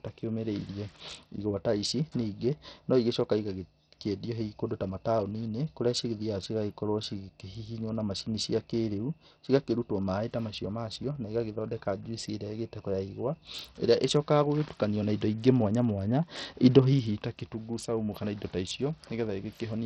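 From start to finish the speech carries heavy Bluetooth SBC compression damage, likely from a starved bit pool, which fits a rate near 64 kbps. The top bands get almost no bits, so treble flickers in and out while gritty, aliased noise rides along.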